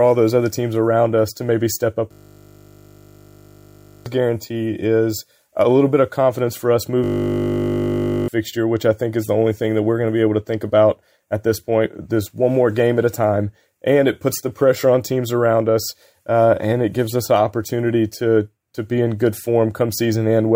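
A system hang loop runs from 2.12 to 4.06 s and again from 7.04 to 8.28 s. Each time the system stalls while the audio hardware keeps replaying the same 20 ms stretch of its buffer, so the sound freezes into a steady 50 Hz buzz instead of stuttering. The first hang repeats that fragment 97 times, the second 62 times, and around two seconds and one and a half seconds of audio are lost respectively.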